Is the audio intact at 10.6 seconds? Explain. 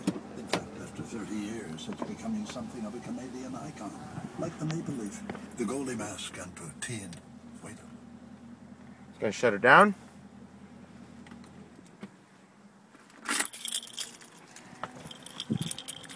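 Yes, the audio at 10.6 seconds is intact, with no dropout, click, distortion or other audible fault at that moment.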